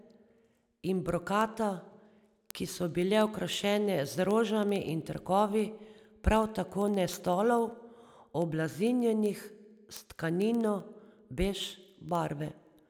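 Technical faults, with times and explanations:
0.12 to 12.86 s, word clock ticks: a steady patter of sharp ticks roughly every 70 ms, around 200 across the speech. The receiver isn't locked to the sender's clock and drifts by something like 300 ppm, so each slip drops or repeats one sample.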